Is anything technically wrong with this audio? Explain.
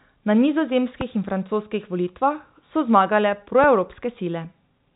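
Yes. There are two loud pops, at 1.01 to 1.03 s and 3.64 to 3.66 s, each a single sharp burst peaking roughly 10 dB above the speech, which continues underneath. The likely cause is a sudden voltage step or pulse, from a switch, static or a driver glitch, entering the signal path, with the following circuits shaping it into a brief thump. On a waveform each appears as a tall isolated spike. On a spectrogram it is a thin vertical stripe spanning the telephone band, which stops near 3.8 kHz because of the G.711 coding.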